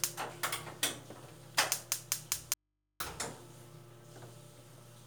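At 2.54 s the sound cuts out abruptly and stays gone until 3.00 s, an audio dropout to a faint residue lasting about 0.47 s. The gap is not silent: a low mains hum sits there, roughly 45 dB below the normal signal level, and the sound returns just as suddenly. The likely cause is a brief loss of the wanted signal while the path after the break stayed live, leaving an open input that picks up hum.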